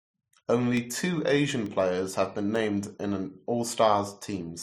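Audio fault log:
0.33–4.34 s, word clock ticks: about ten single-sample slips, roughly every 0.4 s, from an unlocked receiver clock; their steady spacing sets them apart from random clicks.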